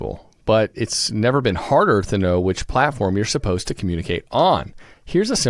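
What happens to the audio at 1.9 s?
Nothing goes wrong at 1.9 s: the speech carries straight through that point with no dropout, click, distortion or other technical fault.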